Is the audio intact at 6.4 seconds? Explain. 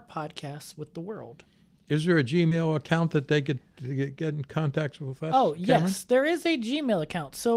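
Yes, the speech at 6.4 seconds is intact, with no dropout, distortion or other fault at that moment.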